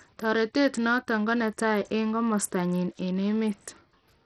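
This speech clip carries heavy codec damage from start to finish: the upper frequencies thin out and flicker in and out, while a gritty, granular noise and aliasing tones cling to the speech. The likely cause is Bluetooth SBC compression at a starved bit pool, around the level of a 64 kbps stream, where the weaker top sub-bands receive almost no bits and the remaining bands are coarsely quantised.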